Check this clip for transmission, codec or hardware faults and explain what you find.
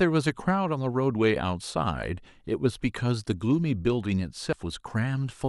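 One fault is audible near the end of the speech. From 4.50 to 4.53 s there is damaged data in the compressed stream. It lasts about 33 ms. Some of the coded bytes at this point are wrong. The decoder cannot make sense of the affected frames. It loses sync and scans ahead for the next valid frame header before decoding picks up again. What comes out is a brief chirp, squawk, click or short hole in the speech.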